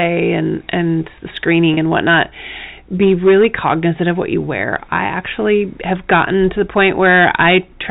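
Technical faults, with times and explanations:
Throughout: hard clipping, about 13 dB of overdrive flattening roughly 3% of samples; waveform peaks sheared flat, spectrogram shows harmonic smear above loud syllables, heard as harsh fuzz.
1.74 s: packet loss with pitch repetition, 30 ms lost between "and and the" and "and whatnot", last pitch period repeated; waveform shows repeated, fading cycles, spectrogram a brief steady buzz. Telephone-band G.711 passes normally.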